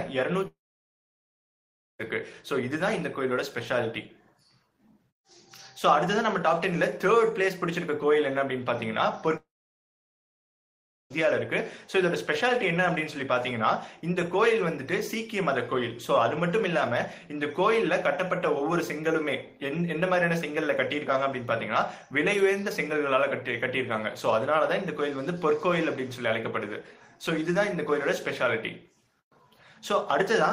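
At 0.47 s the audio breaks off until 2.01 s, and again from 9.37 s to 11.12 s. Each time, the last sound carries on briefly as a fading buzz before giving way to silence for about 1.4 s and 1.6 s respectively. The pattern points to a long network dropout as the likely cause. The receiver stopped getting audio, extended what it last had, then gave up. Playback resumes later with those 1.5 s and 1.7 s stretches gone.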